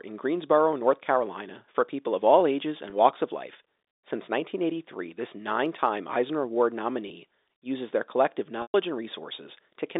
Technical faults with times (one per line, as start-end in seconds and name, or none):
2.90-2.92 packet loss with pitch repetition
7.08-7.10 packet loss with pitch repetition
8.62-8.74 packet loss with pitch repetition